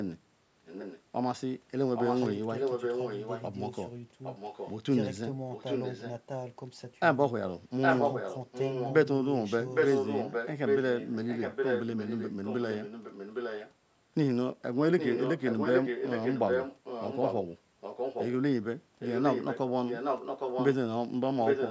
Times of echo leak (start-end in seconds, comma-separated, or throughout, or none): 0.65-1.02, 1.96-6.12, 7.81-13.72, 14.98-21.70